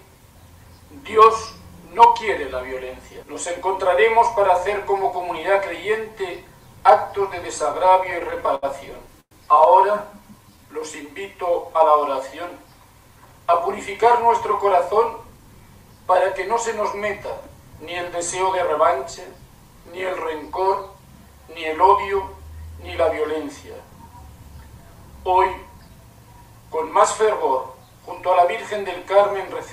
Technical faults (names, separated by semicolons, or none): repeated stalls (stutter); call audio freeze; jitter buffer slow-down; jitter buffer speed-up